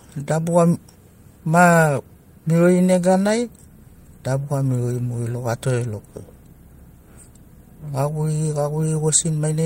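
No technical faults can be heard anywhere in the recording.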